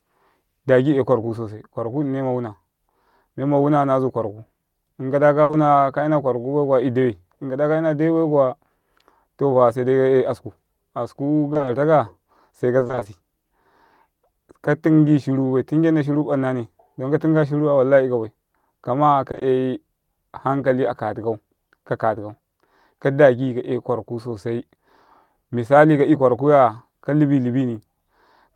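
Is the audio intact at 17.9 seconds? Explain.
Yes, at 17.9 seconds the speech plays through cleanly, with no dropout, click, distortion or other fault at that point.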